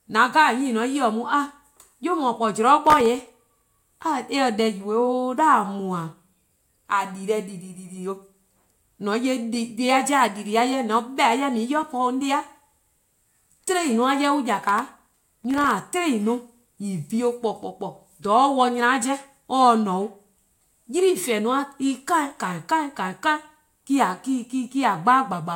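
At 2.85 s the speech breaks into processor overload crackle lasting until 3.65 s. It returns from 14.69 s to 15.71 s. Each time, the processor falls behind and misses dozens of very short buffer deadlines over a short stretch. The buffers fit a size of under a millisecond. Every missed buffer drops out to silence with hard edges. These tiny gaps pile up into a gritty, tearing crackle over the voice, which stops once the load eases.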